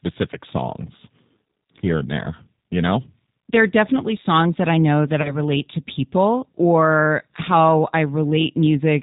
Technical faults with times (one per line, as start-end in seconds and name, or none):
0.00-9.02 G.729 codec
5.22-5.33 VoIP packet loss concealed by the speech codec